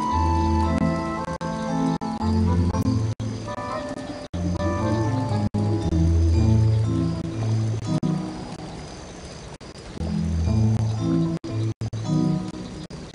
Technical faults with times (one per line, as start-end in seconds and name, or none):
none